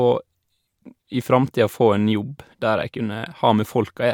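No technical faults can be heard anywhere in the speech recording. At no moment is the audio disturbed, so there is nothing to mark in time.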